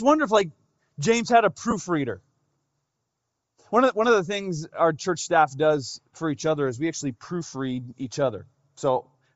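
Across the whole recording the speech has a breathy, grainy edge, and the top of the spectrum sounds filled with noise. That is likely Bluetooth LC3 compression at a low bitrate, which fits roughly 32 kbps with 7.5 ms frames.

From 1.71 to 1.73 s, right after "had a", there is a brief 15 ms loss. These are lost LE Audio frames. The decoder covered the gap by repeating the last spectrum with scrambled phase. The gap's length fits two 7.5 ms frames.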